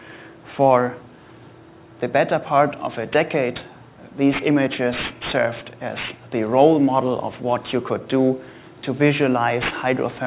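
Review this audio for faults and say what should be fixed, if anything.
Aliasing runs throughout the clip. The sound was resampled downward without an anti-alias filter, and the folding edge at 4 kHz fits a drop to 8 kHz sampling. Content above that edge reflects back as gritty, metallic tones unrelated to the source, roughly 15 dB below the main signal. To prevent it, low-pass the audio below the new Nyquist limit before reducing the sample rate.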